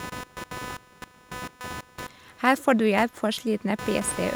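A buzzing, chirping layer of interference runs under the speech for the entire clip, pulsing at a rate of roughly 300 Hz and sitting only about 15 dB below the talker. This is computer activity noise: shifting load on the processor, graphics card or mouse disturbs the ground that the audio circuit shares, so the buzz follows the machine's activity rather than anything in the speech.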